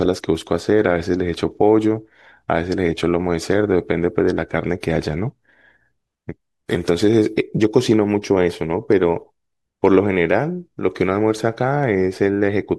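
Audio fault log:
No fault is found in this speech clip.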